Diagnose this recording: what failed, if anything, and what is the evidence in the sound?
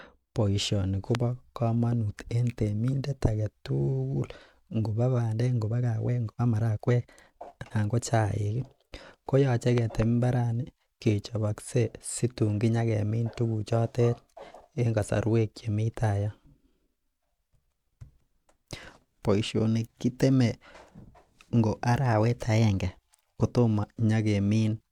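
A sharp pop lands at 1.15 to 1.17 s, roughly 20 dB above the speech, and a double pop runs from 9.78 to 10.04 s at roughly 15 dB, with speech continuing underneath. These are loud pops, likely from a voltage step in the analogue wiring, such as a plug or switch transient.

From 5.24 to 8.02 s the speech suddenly rushes at 1.46 times normal pace, with the pitch unchanged. This is a time-stretched section, likely from editing software that squeezed the audio by dropping short fragments to preserve pitch.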